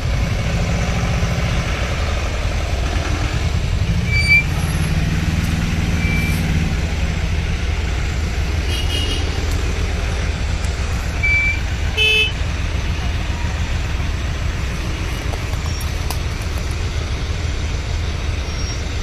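Compressed frames are skipped at 2.79, 3.81, 11.2, 12.26, 14.54, 15.79, 17.09 and 18.77 s. At each point, whole blocks of coded audio never reach the output. The sound jumps forward by a fraction of a second, roughly 0.2 to 0.7 s, with the biggest jumps near 11.2 and 12.26 s. The jumps fit a frame length of about 46 ms.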